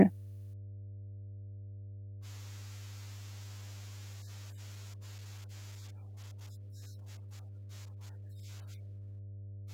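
Mains hum runs under the speech from start to finish. It is a steady low tone at 50 Hz, with some low harmonics above it. The power line has leaked into the signal path, most often through a ground loop or a nearby transformer. The hum sits only a little below the speech. It never changes level or pitch, so it stays audible even in pauses.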